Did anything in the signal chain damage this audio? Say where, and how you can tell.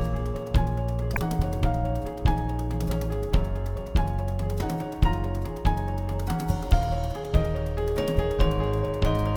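Yes, codec stage: a corrupt frame decoded, bit-flipped frames played anyway, throwing misplaced energy into a burst at 1.13–1.18 s, peaking about -10 dBFS.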